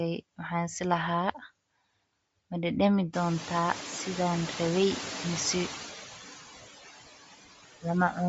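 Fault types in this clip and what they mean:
Noise suppressor artifacts: a suppressor pulls steady background down by about 13 dB between phrases, so the room noise, which rises around three seconds in, pumps beneath speech.
Bluetooth LC3 compression: likely low-bitrate LC3 coding, fitting about 32 kbps in 10 ms frames, strips everything above 7.7 kHz and leaves plainly audible grainy, breathy codec damage on speech.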